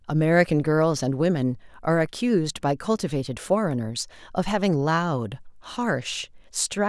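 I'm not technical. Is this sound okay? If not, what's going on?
Yes, nothing here sounds wrong; the recording is fine.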